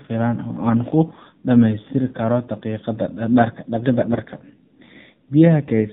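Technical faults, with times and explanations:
Throughout, AMR narrowband mobile codec: the speech has passed through AMR-NB at a low rate, around 7.4 kbps, and the damage is plainly audible. Everything above 4 kHz is gone, so sibilants and consonant detail are dull and boxy. At this bit budget the codec's vocal-tract model is fed by only a sparse set of excitation pulses per subframe, which gives the voice a buzzy, synthetic edge rather than natural breathiness.
4.02 to 4.19 s, AMR bit errors: for about 0.17 s, a span consistent with eight 20 ms frames, the speech turns hoarse and gargly while keeping roughly its pitch and loudness. The sound points to corrupted low-priority bits, about 5 percent of them, slipping past the frame checksum. Misplaced excitation pulses and wrong fine gain and spectral values scramble the texture, not the overall contour.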